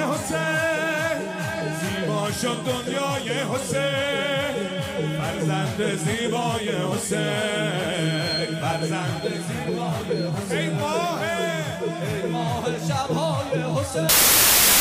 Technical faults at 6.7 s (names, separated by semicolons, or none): none